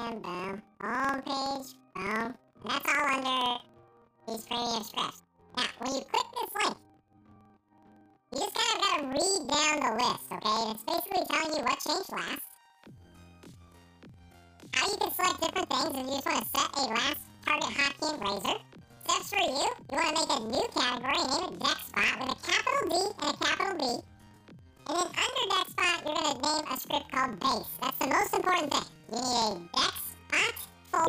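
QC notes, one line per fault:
throughout planar audio read as interleaved: each 46.4 ms block, which fits 2048 samples, plays twice at double speed, so the sound is an octave high with a 21.5 Hz flutter.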